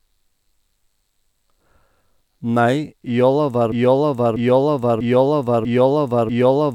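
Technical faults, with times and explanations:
3.72 s to end, broken-record loop: a 0.64 s speech fragment repeats five times, likely a stalled stream; waveform shows identical blocks tiling exactly.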